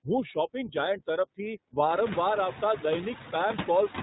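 From the start, the speech runs through the iLBC codec, and the codec damage is plainly audible. Everything above 4 kHz is gone, so sibilants lose their edge, and the voice has a slightly rough, synthetic grain. The grain fits the 15.2 kbps mode with its 20 ms frames. It comes from coding the excitation frame by frame rather than from simple low-pass filtering. A plain bandwidth limit would sound dull but smooth, not buzzy.

Around 0.30 to 0.33 s comes a lost iLBC frame, a gap of about 20 ms that fits a single dropped frame. The decoder fills it by repeating the last pitch cycle with some noise mixed in, so the gap is heard as a tiny held, buzzy vowel rather than silence. That sets it apart from a dropout or a click. Because iLBC frames stand alone, the voice recovers cleanly in the very next frame, with no lingering smear.

Throughout, noise suppressor artifacts are present, cutting the steady background by about 7 dB. 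The suppressor pulls the noise down in the pauses and lets it come back up under the speech, so the floor pumps with the talking. This is most noticeable after about two seconds, when the room noise rises by about 21 dB and the suppressor has more to remove. A simple noise gate would chop the sound on and off, while this suppressor works band by band.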